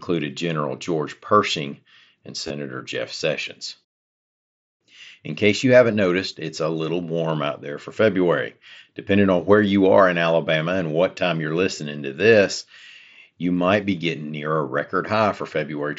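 Concealed Bluetooth headset packet loss occurs at 2.48 to 2.50 s. About 22.5 ms of the mSBC stream went missing, consistent with three lost packets. The phone bridged the gap by repeating a matching stretch of the preceding waveform, leaving a brief buzzy hold and a slight warble as the speech resumes.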